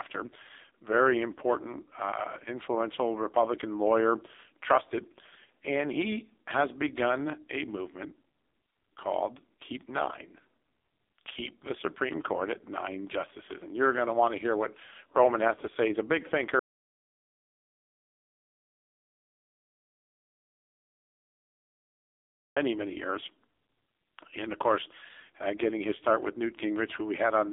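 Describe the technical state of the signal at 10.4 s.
At 10.4 s the speech is carried by an AMR narrowband mobile codec, and this holds for the whole clip. The line band runs from about 300 Hz to 3.6 kHz, and nothing passes above 3.7 kHz. The codec rebuilds the voice from a vocal-tract model fed by a few pulses per short frame. Here the damage is heavy. The voice sounds thin, buzzy and synthetic, which points to a low bitrate near 5.9 kbps.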